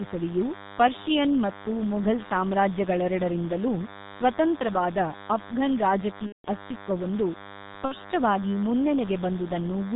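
Speech clip, heavily damaged throughout by G.723.1 codec coding: a spectrogram shows nothing above 4 kHz and smeared consonant transients, and the sound is muffled and hoarse, fitting a 6.3 kbit/s stream. A DECT cordless phone buzz runs underneath, roughly 15 dB below the speech, appearing as a comb of 100 Hz harmonics from radio bursts every 10 ms. VoIP packet loss concealed by the speech codec occurs from 6.26 to 6.48 s, right after "ಮೊಘಲ್ ಸಾಮ್ರಾಜ್ಯಗಳೆರಡರಿಂದಲೂ ಸ್ವತಂತ್ರವಾದ ಅಫ್ಘನ್", and again from 7.85 to 7.96 s. At each point the decoder extrapolated from its last pitch and filter, lowering the gain frame by frame.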